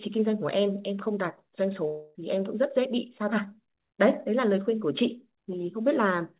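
A speech clip carried over a narrowband call path, its sound stopping at 4 kHz in a way that fits G.711 mu-law at 64 kbps. From 1.88 to 2.17 s the sound smears into a fading buzz with no true silence, then resumes with roughly a quarter second missing. The likely cause is a long network dropout, with the receiver extending the last sound to fill the gap.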